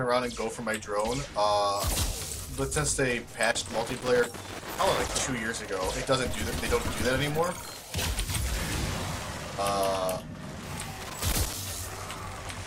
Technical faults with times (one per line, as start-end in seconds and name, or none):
3.51-5.31 loose connector crackle
11.01-11.53 loose connector crackle